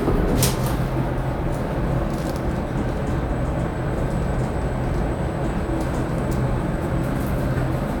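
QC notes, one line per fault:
Nothing stood out on listening to this recording.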